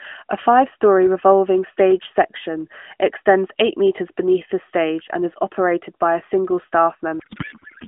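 At 7.20 s a codec payload misread begins and runs to the end of the clip. The speech turns into garbled noise and warble that barely tracks it. The frames are likely packed octet-aligned but unpacked as bandwidth-efficient AMR, so every field lands in the wrong place. Before this, the narrowband AMR sound is limited to about 200 Hz to 3.4 kHz with light coding damage, which fits a 12.2 kbps mode.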